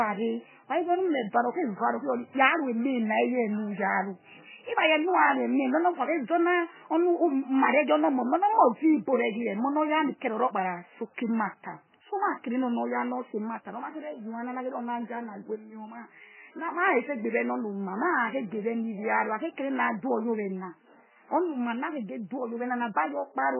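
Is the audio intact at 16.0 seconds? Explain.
No. At 16.0 s, as throughout, heavy MP3 compression likely removes everything above 3 kHz, and weak frequency lines dropping in and out leave the speech watery and swirly.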